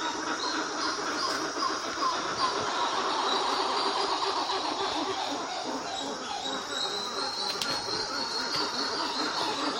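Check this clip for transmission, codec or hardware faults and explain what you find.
No faults can be heard.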